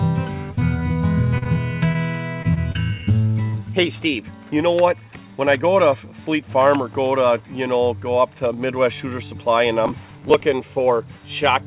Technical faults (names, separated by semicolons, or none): short concealed packet loss; short stall from a late packet; repeated packet loss (robotic sound); processor overload crackle